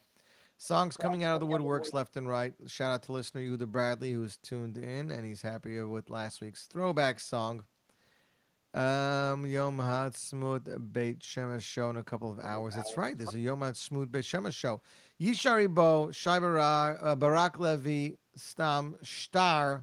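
Echo leak is heard at 0.97–1.17 s and 1.43–1.93 s, then at 12.43–12.49 s, 12.70–12.97 s and 13.25–13.34 s. A copy of the speech returns 287 ms late, only about 5 dB down early on and fainter later. The likely cause is a loudspeaker-side echo canceller passing it back.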